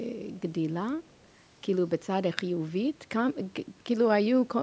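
From 0.96 to 1.32 s, an echo leak: the echo canceller on a loudspeaker end likely let part of its microphone pickup pass back into the call. A very faint copy of the speech returns 204 ms late, heard as a brief ghostly repeat.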